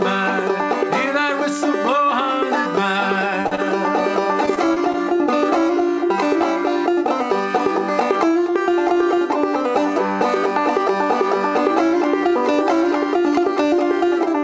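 At 3.42 s a packet never reached the decoder in time, a short concealed packet loss: about 20 ms of audio is gone, and the receiver extends the preceding sound for 30 ms, heard as a brief smear.

From 3.47 to 3.53 s a late packet leaves the jitter buffer empty, a short stall. The last sound is stretched for 44 ms until it arrives, holding it too long, though nothing is lost.

At 3.55 s another short concealed packet loss removes about 20 ms, patched with 24 ms of continued sound, another quick smear or wobble.

Between 4.46 and 4.96 s packets drop repeatedly, causing repeated packet loss with a robotic sound. Four gaps, the longest 17 ms, lose 60 ms in total and are covered by 56 ms of patching, about 11% of that stretch. The result is choppy, with fragments missing.

Throughout, nothing sounds above 8 kHz, which fits a G.722 call path at 64 kbps.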